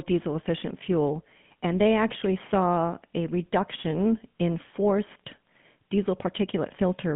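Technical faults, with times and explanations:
Throughout, GSM full-rate codec: the speech has a plainly audible buzzy, gravelly roughness and sits in a narrow band from 150 Hz to 3.4 kHz. The codec rebuilds the voice from a vocal-tract model driven by sparse pulses, which fits 13 kbps GSM.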